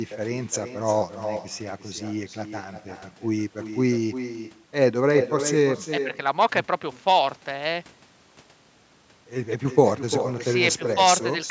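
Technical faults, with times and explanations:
Throughout, echo with no canceller: the far end's loudspeaker is picked up by its microphone and nothing removes it, so the speech comes back roughly 0.4 s later, about 8 dB quieter, as a thinner copy trailing every phrase.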